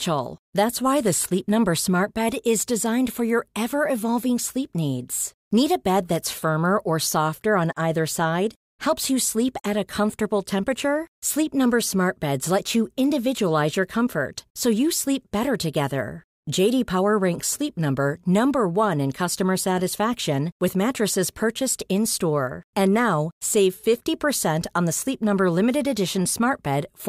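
Speech, with no technical faults to be heard anywhere in the recording. Nothing in it calls for a time or a cause.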